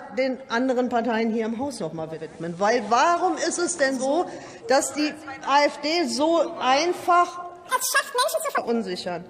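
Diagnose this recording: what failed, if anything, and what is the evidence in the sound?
From 1.98 s to 4.24 s the receiver shows digital radio blending to analogue, a reception and tuner-stage fault. The hybrid receiver lost its digital stream and cross-faded, over about 0.4 s, to the station's FM simulcast, then returned to digital. During that stretch a steady hiss sits roughly 35 dB under the programme. The level stays the same across both transitions.

From 7.69 s to 8.58 s there is a section at the wrong speed. This short stretch runs at 1.93 times normal speed, so it sounds hurried and its pitch jumps up by roughly ten semitones, then drops back at 8.58 s. Because pitch and tempo shift together, this is a resampling or clock error rather than time-stretching. The likely cause is a playback or editing stage applying the wrong sample-rate clock to that segment.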